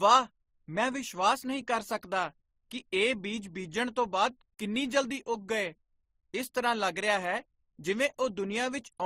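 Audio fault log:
Throughout: transcoding between lossy codecs. The speech carries two overlapping sets of coding artefacts and has nothing above 15.8 kHz. This is likely a low-rate MP3, near 39 kbit/s, re-encoded as Opus near 32 kbit/s, which spent bits copying the earlier damage and added its own.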